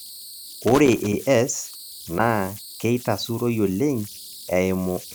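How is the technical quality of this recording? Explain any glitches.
The technical quality is poor. The speech carries three kinds of fault.

Converter idle tones run throughout. A tone near 4 kHz sits about 19 dB below the speech. An undithered delta-sigma converter settles into repeating bit patterns.

Loose connector crackle occurs from 0.67 to 1.13 s and from 4.05 to 4.27 s. A worn contact makes and breaks, chopping the signal into irregular scratchy bursts.

From 2.17 to 2.20 s, the audio jumps ahead with a brief chirp or noise burst. The likely cause is a broken MP3 bit reservoir, consistent with one 24 ms frame reading another frame's data.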